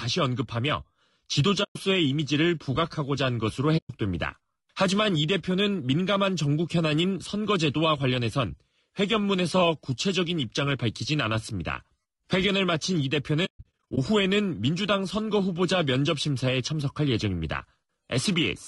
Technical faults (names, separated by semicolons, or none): low-delay AAC compression; AAC frame loss with muting